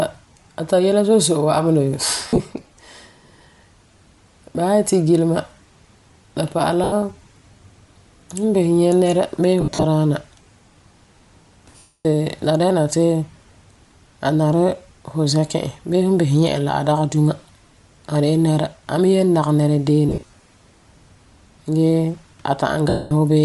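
The speech has a grainy, breathy edge throughout. Its upper band sounds thinned and filled with noise. The likely cause is Bluetooth LC3 compression with 10 ms frames, and the damage fits a bitrate of around 48 kbps.

Lost LE Audio frames break up the sound at 2.28 to 2.40 s, 6.84 to 6.93 s, 9.61 to 9.84 s, 11.78 to 12.05 s, 20.09 to 20.33 s and 22.89 to 23.12 s. The decoder fills each gap with a noisy smear. The longer 270 ms gap fades further.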